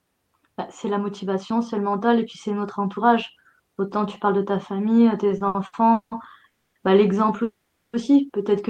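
From 5.27 to 6.14 s the speech shows repeated stalls (stutter): five short gaps, the longest 180 ms, where packets arrived late and the jitter buffer emptied. The receiver stretched the last sound over 360 ms in total, about 41% of that span, so the delivery drags without losing content.

A call audio freeze follows at 6.47 to 6.78 s, where the sound halts and the last fragment is held as a fading buzz or hiss for 280 ms. A longer one at 7.43 to 7.96 s holds for 500 ms. Neither drops to silence, and speech resumes where it stopped. The likely cause is packets held in transit, emptying the jitter buffer and adding that delay.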